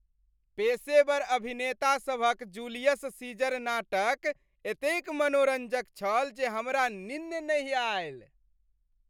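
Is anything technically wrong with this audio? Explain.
No, nothing technically wrong stood out on listening to this clip.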